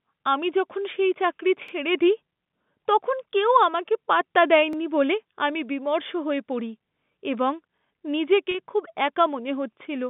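At 1.68 s, after "আমি যখন সেই চাকরি", and again at 4.73 s, after "তখন কেউ আমাকে পাত্তা", overlapping chunks cause a brief stutter. Each new 3-second chunk begins about 48 ms before the previous one ended, so that slice plays twice at the join.

At 8.51 s, between "এবং নিজেকে" and "খুব একা", 30 ms of audio drops out, which fits a single lost packet. Packet loss with pitch repetition fills the gap by repeating the last pitch period, heard as a short, slightly held buzz over the narrow telephone band.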